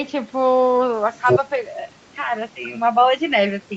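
A speech recording with no technical faults to report. The audio stops at about 8 kHz, as expected from a call microphone and an Opus call path limited to that band.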